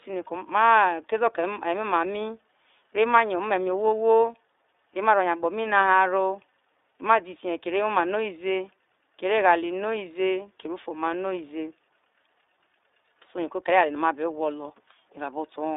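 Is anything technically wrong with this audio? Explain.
Yes. The whole speech clip carries iLBC codec damage. Nothing reaches past about 3.7 kHz, and little below 300 Hz. Each 20 ms frame is coded independently, at a rate that fits 15.2 kbps. The result is plainly rough, slightly synthetic speech.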